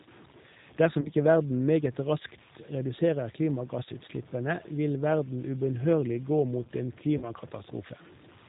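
Throughout the speech, the signal was likely truncated to very few bits without dither, which fits a 7-bit word. The resulting grainy, signal-following distortion sits roughly 25 dB below the speech and turns quiet passages gritty. Across the whole clip, G.729 codec coding strips everything above 4 kHz and rebuilds the voice from a synthetic model, consistent with an 8 kbit/s stream, leaving a plainly rough, synthetic timbre. From 1.01 to 1.11 s, just before "ikke verden meget raskt", VoIP packet loss concealed by the speech codec bridges about 40 ms of missing audio, which fits two lost packets. The decoder extends its last pitch and filter into a fading, stretched sound, and the voice stays weak briefly afterwards. The same concealment recurs from 7.18 to 7.31 s, right after "ubønnhørlig gå mot en", with a similar stretched, decaying sound.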